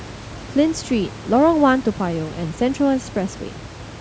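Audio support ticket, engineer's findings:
No system fault found in the speech; room noise sits about 16 dB below the speech, which is the recording environment, not the signal chain.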